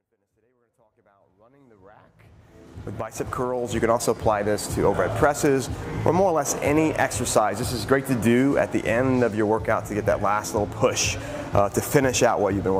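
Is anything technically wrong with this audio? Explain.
No, nothing technically wrong; the fade-in is smooth.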